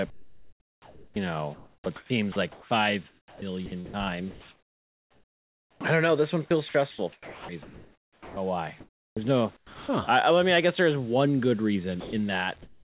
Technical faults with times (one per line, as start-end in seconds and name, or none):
0.10-5.81 sound chopped by the voice detector
6.47-9.89 sound chopped by the voice detector
12.01-12.96 comfort noise in place of the background